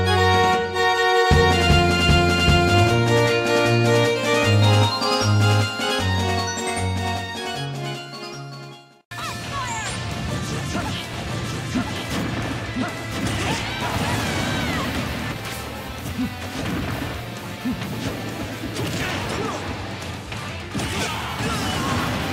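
From 11.13 to 14.15 s the audio is heard twice: a full-band copy trails the original by roughly a second, around 5 dB quieter, with no decay or room colour, and it starts and stops abruptly. This doubled audio track likely comes from a second, slower capture path.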